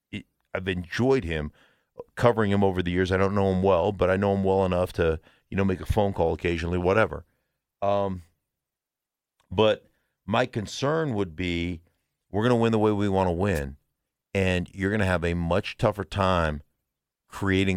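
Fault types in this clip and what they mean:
Wireless microphone noise hit: a static swish at 13.55–13.60 s, after "way we want to", as the FM radio signal fades; noise-filled, unlike a silent digital dropout.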